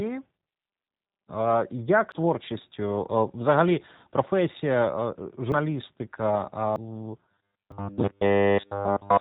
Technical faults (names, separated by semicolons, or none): G.729 codec; dropped buffer (overrun); robotic sound from repeated short buffers